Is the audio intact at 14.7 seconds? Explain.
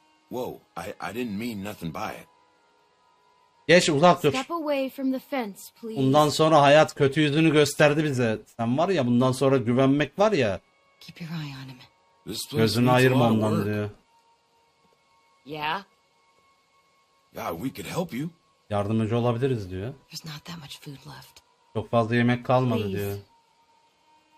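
Yes, the audio at 14.7 seconds is intact, with no dropout, click, distortion or other fault audible at that point.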